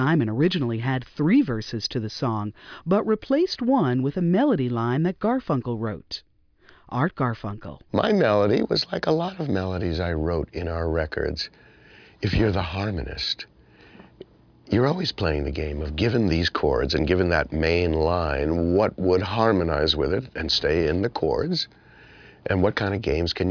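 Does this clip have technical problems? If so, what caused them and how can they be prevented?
No, there are no technical problems to report here.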